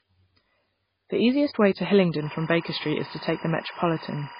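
From the start the speech carries the swirly, watery smearing of heavy MP3 coding, with nothing above 5 kHz. This is likely low-bitrate audio saved at a high bitrate. Unlike plain low-pass filtering, the damage includes coding artefacts that the later high-rate pass preserved and could not repair.

From 2.23 s to the end, timecode bleed adds a steady chirping warble about 20 dB below the speech. Leaked 24 frames/s timecode switches between pitches near 1 and 2 kHz. That rapid two-tone alternation sets it apart from a single steady interference tone or hum.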